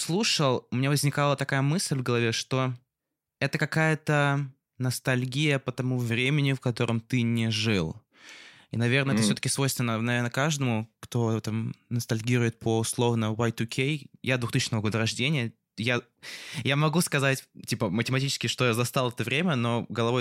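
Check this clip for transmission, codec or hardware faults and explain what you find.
No faults detected in this recording.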